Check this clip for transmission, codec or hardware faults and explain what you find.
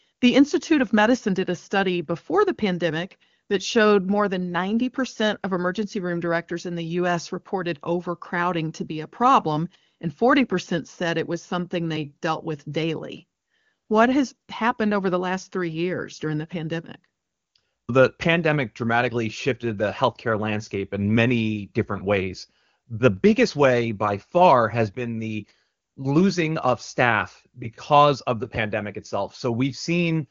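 Nothing here sounds wrong: the speech comes over the way HD Voice calls do, with the top end stopping at about 7.2 kHz and none of the roughness of the lower AMR wideband rates, which fits the codec running near its highest setting.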